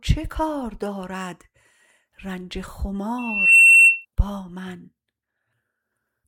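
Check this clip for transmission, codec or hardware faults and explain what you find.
There's one fault, a loudspeaker feedback squeal from 3.18 to 4.05 s: a 2.7 kHz tone swells over roughly 0.4 s, ending up well above the sound, about 15 dB, as mic and speaker loop.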